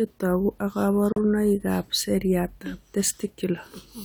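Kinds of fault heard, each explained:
Gap at a join of encoded pieces: the speech drops into silence for about 39 ms at 1.12 s, then resumes exactly where it stopped. Two separately encoded pieces were joined without trimming the encoder's leading silence and the padding on the last frame. On a waveform, the amplitude falls to a flat line and comes back. On a spectrogram, a narrow blank vertical band cuts through every frequency, its edges slightly smeared by the codec.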